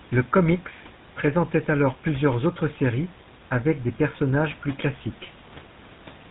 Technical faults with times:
0.00-6.30 GSM full-rate codec

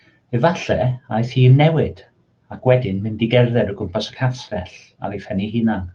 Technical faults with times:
2.53-2.67 lost packet rebuilt from error correction

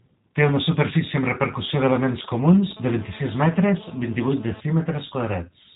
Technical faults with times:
0.00-5.76 G.729 codec
1.53-2.73 GSM signalling bursts
2.77-4.60 GSM phone buzz

